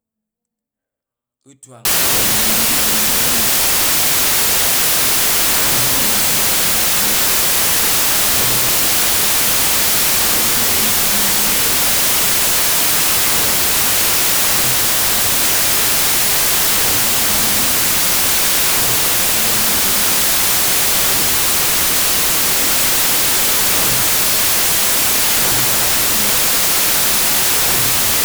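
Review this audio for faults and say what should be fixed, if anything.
Samples built from the wrong bytes, from 1.85 s through to the end at 28.24 s. From that point the speech is replaced by loud, harsh broadband noise. The reader is assembling each sample from misaligned or swapped bytes, so the rapidly changing low-order byte lands in the high-order position and dominates every value, burying the real waveform in noise. To prevent it, decode with the file's declared byte order, sample width and frame alignment.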